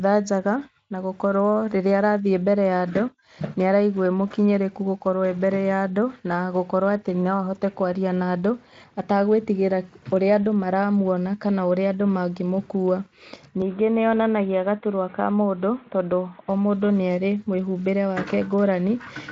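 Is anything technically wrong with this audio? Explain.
Yes. Input switched to a poorer device, 13.62 to 16.49 s: the recording likely jumped to a narrower-band microphone or headset. Speech abruptly loses everything above 3.8 kHz, sounds boxy and gains a faint new noise floor, with no gap and at about the same level. Around it, the Speex-coded band reaches 7.6 kHz.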